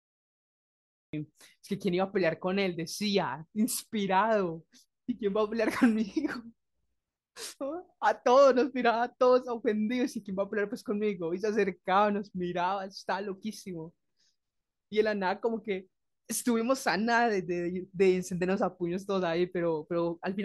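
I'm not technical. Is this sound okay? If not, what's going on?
No. This is a cut-off start: the recording began late, so it's completely silent until 1.13 s, then the speech jumps in mid-sound with no natural beginning. Unlike a dropout, which interrupts audio already playing, here nothing comes before the gap.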